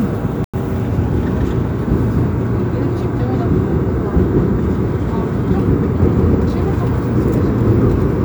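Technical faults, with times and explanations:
0.44–0.61 s, corrupt frame muted: damaged bits left compressed frames the decoder rejected, so the player filled in silence, an abrupt hole of about 0.17 s, which fits two lost frames. The sound resumes afterwards on its original timeline, with nothing shifted.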